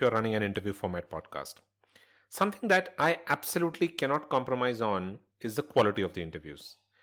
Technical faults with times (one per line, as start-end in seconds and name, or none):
none